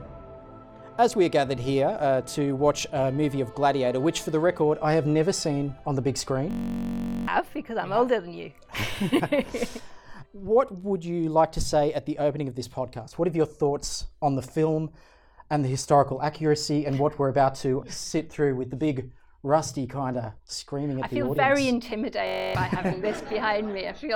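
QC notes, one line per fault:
6.51–7.28 s and 22.27–22.55 s, system hang loop: playback froze and the output kept replaying one 21.33 ms slice, 36 times in the first event and 13 in the second. The repeated slice fits a 1024-sample buffer. The slice cycles at 46.9 Hz, the two events drop roughly 0.7 s and 0.3 s of new audio, and the result is a steady buzz at that rate. On the waveform, identical blocks repeat back to back. On the spectrogram, the frozen spectrum shows flat horizontal bands with harmonics spaced 46.9 Hz apart.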